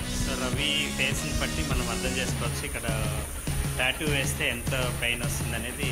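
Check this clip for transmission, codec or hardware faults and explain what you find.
One fault stands out, a short concealed packet loss from 0.87 to 0.91 s. About 20 ms of audio arrived too late to decode. The receiver filled that gap by extending the preceding sound, then blended back into real audio. It comes across as a brief smear or wobble.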